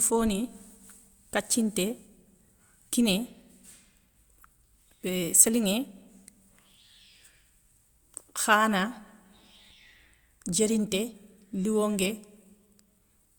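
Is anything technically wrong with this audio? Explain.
Yes. At 9.71 s there is a brief skip in the speech, likely audio missing between chunks: roughly 20 ms vanishes as one processing block of about 6 s closes and the next opens. Unlike a dropout, no silent gap is left, because the two sides butt directly together.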